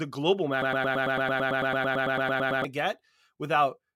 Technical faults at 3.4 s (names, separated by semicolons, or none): none